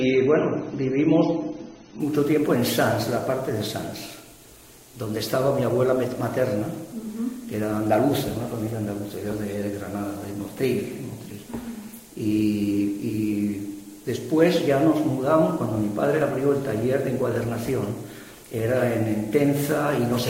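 For the first 2.0 s, the audio has nothing above about 6.3 kHz, and coding artefacts are more obvious than in the rest of the clip. At 2.0 s the full treble returns abruptly, with no gap or dropout. This is an adaptive stream starting at a low bitrate. The player began on a low-rate rendition to start playback quickly, then switched up after measuring the connection. The sound fits a step from roughly 24 kbit/s AAC to about 96 kbit/s.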